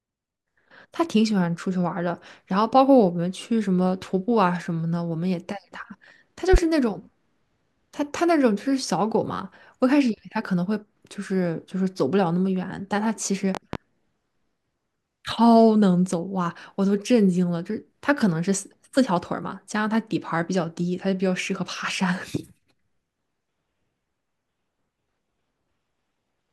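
From 6.54 to 6.62 s, a loud pop strikes as two sharp bursts, about 15 dB above the speech. From 13.55 to 13.77 s, a second double pop peaks about 10 dB above. Each is likely a voltage spike. The speech continues underneath.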